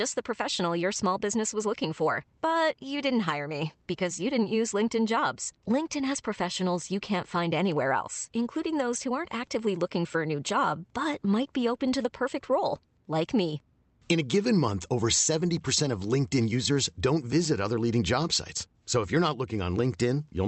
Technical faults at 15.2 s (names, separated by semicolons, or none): none